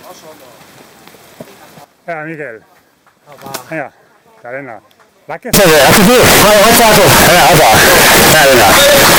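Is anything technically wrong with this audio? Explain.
Yes. From about 5.54 s to the end at 9.19 s, the audio turns into a loud, harsh, almost square-edged wall at a nearly constant level, with background noise brought up as loud as everything else, though the pitch is still there to follow. That's the float-read-as-integer fault. Most likely, 32-bit float samples were read as 32-bit integers, so each sample's sign and exponent bits end up setting the level instead of the actual signal.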